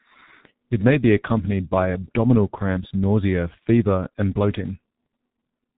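From start to finish, the speech carries heavy G.723.1 codec damage. Nothing reaches above 3.8 kHz, so the sound is dull and muffled. The codec works in 30 ms frames and refreshes its model of the voice slowly. Fast changes get smeared across frames. Consonants blur into one another. The voice turns hoarse. The thinness of the result fits a very low bitrate of around 6 kbit/s.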